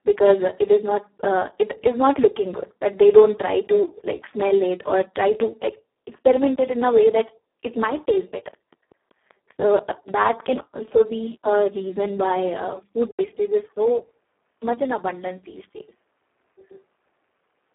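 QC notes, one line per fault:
Throughout: Speex codec. The speech sounds hoarse, noisy and close to robotic, which fits a very low bitrate of around 4 kbps. At that rate the excitation signal gets too few bits, so voicing turns rough and buzzy. The band is limited to a telephone-like 300 Hz to 3.5 kHz, and there is nothing at all above 3.8 kHz. On a spectrogram the harmonics look smeared and grainy, and the upper region is empty.
7.95–10.10 s: train of clicks. Starting after "a way that it" and stopping before "that can also be", sharp ticks arrive at a steady 5.2 per second, about ten in total. They peak at roughly the level of the speech itself and carry on through the gaps between words. The even spacing and identical shape point to a likely cause in interference or a struggling interface. On the waveform they show as evenly spaced spikes, and on a spectrogram as thin vertical lines running across the whole band.
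13.11 s to end: input switched to a poorer device. An 80 ms silence opens the change. After it the sound turns duller and boxier, with nothing above 3.4 kHz, about 5 dB quieter, and with a new noise floor roughly 45 dB below the speech. This is likely a change to a narrower-band microphone or a headset call profile. The spectrogram shows a short blank gap, then a lower ceiling and a different background texture, and the waveform envelope drops in height.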